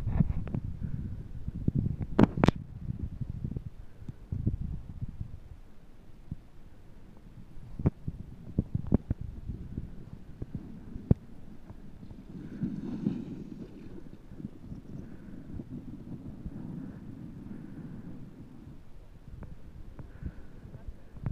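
There are no technical faults to describe in time order in this audio.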